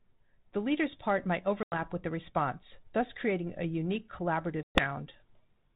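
Packet loss on an ADPCM call cuts hard-edged silences at 1.63 to 1.79 s, after "leader's part might", and at 4.63 to 4.85 s, after "thus creating a unique". They show as flat waveform gaps and blank spectrogram bands. The desynchronised decoder then returns slightly distorted audio.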